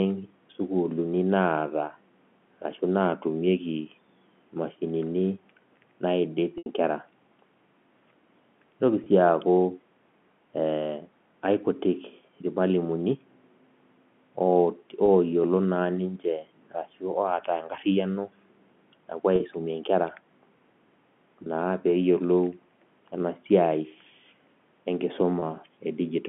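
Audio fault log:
6.58–6.66 s, packet loss with pitch repetition: about 80 ms of audio, which fits four 20 ms packets, never arrived. The receiver filled the gap by repeating the last pitch period and fading it out, so the speech holds a buzzy, frozen tone before returning through a short cross-fade.
9.04–9.06, 15.06–15.08, 19.36–19.40, 21.44–21.46 and 25.40–25.42 s, packet loss with pitch repetition: shorter gaps of 20 ms, and 40 ms at 19.36 s, were bridged the same way, each heard only as a brief held, slightly buzzy note within the narrow telephone-band speech.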